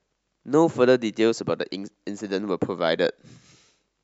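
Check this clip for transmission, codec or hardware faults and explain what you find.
No faults detected.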